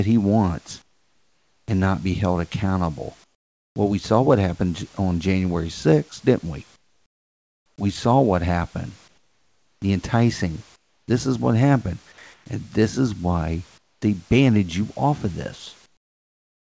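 Comfort noise in place of the background appears in eight speech pauses: 0.82–1.68, 3.24–3.76, 6.76–7.78, 9.08–9.82, 10.76–11.08, 12.34–12.46, 13.78–14.02 and 15.86 s to the end. The room's real background noise drops out. A flat, featureless hiss takes its place, mostly about 14 to 20 dB quieter, and only about 3 dB quieter at 12.34 s. The likely cause is discontinuous transmission.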